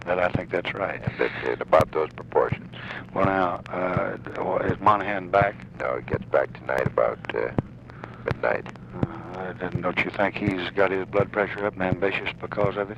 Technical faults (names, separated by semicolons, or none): clock drift buffer slips